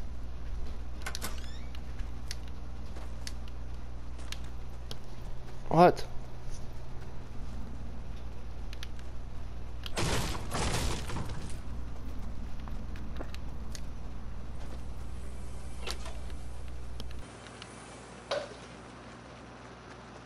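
At 17.22 s the sound abruptly loses its top end and stays that way to the end. Nothing remains above about 10.5 kHz. A faint new background noise appears, roughly 40 dB below the signal. Level holds steady, with no gap. The likely cause is an input switched to a poorer device.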